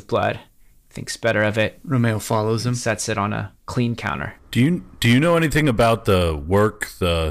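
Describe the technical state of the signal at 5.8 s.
At 5.8 s you're hearing hard clipping, and it isn't local to that moment: it runs through the whole clip. The speech was pushed roughly 6 dB past what the signal path could carry, so the loudest peaks get sliced flat. Only around one percent of samples hit the ceiling, but those squared-off tops spray harmonics high up the spectrum, giving a gritty crackle whenever the speech peaks.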